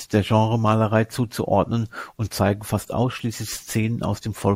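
No technical faults are audible.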